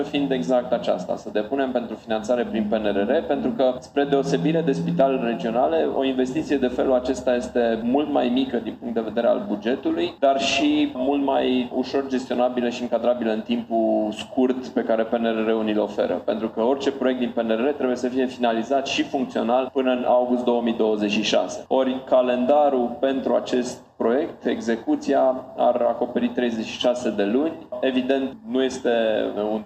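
A stage in the signal chain was driven slightly past its maximum level, so the loudest peaks were cut flat by hard clipping, overloading by only about 1 to 2 dB. It happens across 4.13 to 4.35 s and in brief instants at 5.00 s, 22.50 s and 28.11 s. The squared-off tops add high harmonics that the audio never contained, heard as short crackles on those peaks rather than continuous fuzz, because the overload is small.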